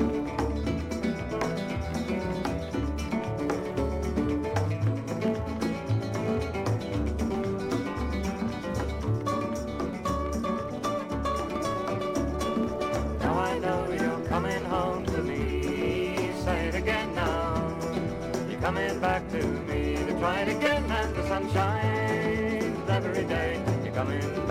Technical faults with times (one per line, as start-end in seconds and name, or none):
0.00-24.51 block size mismatch (truncated)